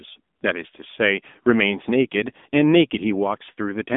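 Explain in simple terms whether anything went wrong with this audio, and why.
Throughout the clip, the voice sounds thin, buzzy and synthetic, with nothing above about 3.8 kHz. That is the AMR narrowband mobile codec, the old phone-call format that rebuilds speech from a simplified vocal model using very few bits.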